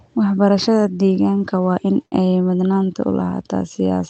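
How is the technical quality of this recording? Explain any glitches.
The speech has two glitches.

A burst of packet loss hits from 2.05 to 2.15 s. Packets arrived too late or never came. The receiver stretched the last sound over about 63 ms, fading it out. So you hear a brief held buzz or hiss. About 60 ms of speech is skipped when the audio resumes.

At 3.80 s there is a single sharp click. The waveform jumps abruptly, likely from dropped samples. Only a handful of samples go missing, a fraction of a millisecond. That is far too short to lose any sound. It leaves just a tick.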